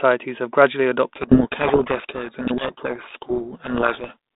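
A codec payload misread in this speech clip, with the G.726 code words unpacked in the wrong bit order, buries the speech in harsh distortion from 1.16 to 4.17 s, right after "have gradually".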